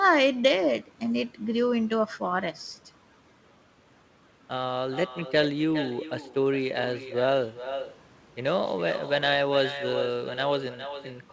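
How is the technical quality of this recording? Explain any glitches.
The technical quality is compromised by one fault running through the whole speech clip, heard over a call path whose content stops at 8 kHz.

Echo with no canceller, throughout: the far end's loudspeaker feeds its microphone and nothing subtracts it, so every phrase returns roughly four-tenths of a second later, about 11 dB quieter and thinner. On a waveform, each burst trails a smaller copy; a spectrogram shows faint, delayed duplicate harmonics.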